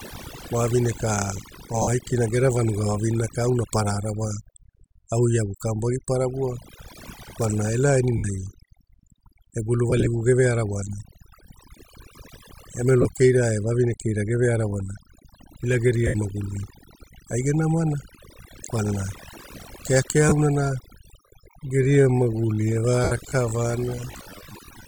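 A speech recording with overdone noise removal throughout: the background drops and breaks up into twinkling specks, and quieter components of the voice were cut with the noise. Lost LE Audio frames cause brief dropouts at 1.82, 8.17, 9.90 to 10.07 (scattered short gaps), 13.02, 16.07, 20.29 and 23.04 s, each lasting about 20 to 75 ms. The LC3 decoder concealed each one by repeating the last spectrum, so the voice blurs into a noisy smear. From 21.15 s to the end, the pace drops abruptly to about 0.65 times normal while the pitch holds, likely a time-stretched section.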